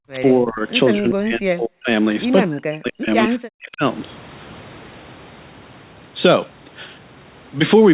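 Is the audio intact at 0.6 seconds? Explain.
No. From 0.00 to 0.69 s the speech is pushed down in pieces, about 40 dB at its deepest and roughly half a second in total. This is speech suppressed in double talk, likely from an echo canceller mistaking the talker for loudspeaker echo and ducking both.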